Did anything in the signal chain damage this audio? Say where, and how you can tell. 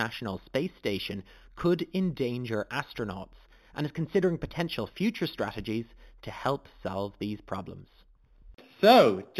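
Yes. The damage is at the sample-rate conversion stage, and it runs through the whole clip. The speech has a dull top with nothing real above 4 kHz. A faint mirrored copy of the spectrum sits from 4 to 8 kHz, roughly 20 dB below the signal. It adds a thin metallic shimmer on sibilants. That is imaging from linear upsampling. Straight-line interpolation filters too weakly to remove those images. The pattern fits an 8 kHz source raised to 48 kHz.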